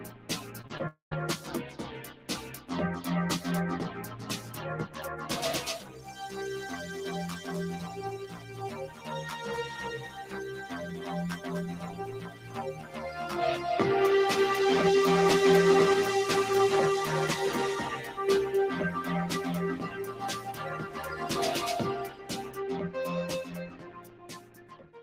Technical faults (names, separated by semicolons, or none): noise suppressor applied to music or sounds; sound cut by the noise suppressor; short concealed packet loss; long network dropout